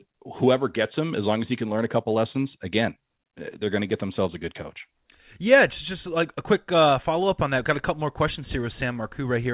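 Speech, and nothing is technically wrong with it; it arrives over a call path that carries nothing above 4 kHz.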